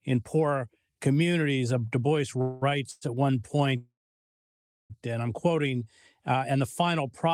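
At 2.41 to 2.64 s and again at 2.91 to 3.03 s the sound stalls into a fading buzzy smear, then picks up where it left off. Those are call audio freezes, likely packets arriving late so the jitter buffer ran dry and filled in. A longer one runs from 3.77 to 4.92 s, decaying to silence for nearly a second before "and I'm". From 5.56 to 6.53 s, between "and I'm" and "the final product of", there's a jitter buffer slow-down. The receiver repeated tiny slices to rebuild its reserve, so the audio plays at about 94% speed with the same pitch and sounds slightly stretched, adding 64 ms.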